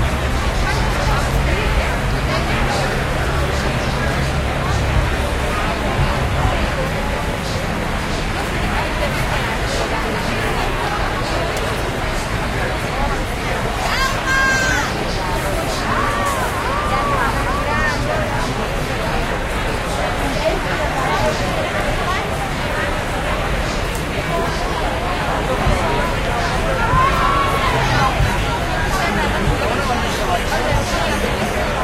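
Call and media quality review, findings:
No audible faults found across the recording; no dropouts, level or timing anomalies identified on review.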